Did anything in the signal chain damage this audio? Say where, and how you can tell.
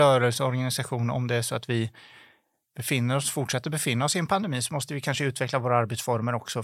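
Yes, there's a crude rate conversion in the sample-rate stage, from 5.31 s to the end at 6.63 s. The speech picks up a gritty, inharmonic fizz riding on the louder, brighter parts, roughly 35 dB down. It sounds like unfiltered linear interpolation, probably a 44.1 to 48 kHz conversion.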